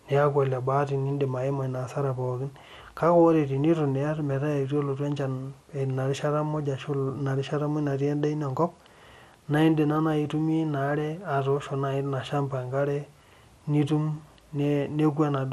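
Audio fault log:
throughout: MP2 compression. The sound likely passed through MPEG Layer II coding at a low rate, which fits about 80 kbps. Too few bits switch off the upper sub-bands and coarsely quantise the rest, so the speech sounds dull, with a plainly audible gurgling, granular roughness.
9.02 to 9.38 s: DAB burbling, just after "endaa ino enkop". Bit errors slipped past error correction into the MP2 data, corrupting samples across successive frames. Short blips of noise appear in individual sub-bands over the speech.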